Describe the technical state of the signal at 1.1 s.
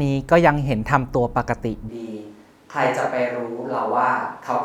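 At 1.1 s the speech signal is intact, with no audible technical fault at that moment.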